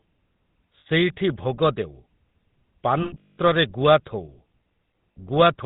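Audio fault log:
Throughout: GSM full-rate codec. The speech has a buzzy, gravelly roughness, plainly audible, which fits a 13 kbps GSM full-rate stream. The vocal tract is modelled and driven by coarse regular pulses, so a spectrogram shows nothing above 4 kHz and smeared, grainy harmonics.
0.80 to 0.87 s, 3.02 to 3.38 s, 5.13 to 5.17 s: lost GSM frames. Missing frames were filled by repeating the last good one at falling level, which gives a rough metallic ring. The middle event covers about 320 ms of losses spread over 360 ms, with the longest run around 200 ms. On a spectrogram, frozen horizontal bands fade toward silence, and the waveform's envelope decays there.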